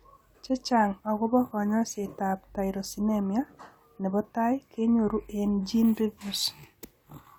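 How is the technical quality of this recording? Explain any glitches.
No glitches or technical faults can be heard here.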